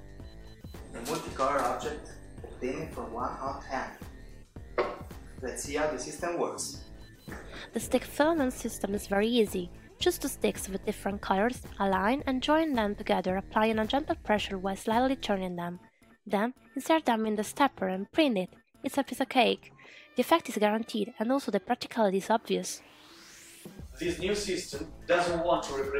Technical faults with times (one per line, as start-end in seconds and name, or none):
none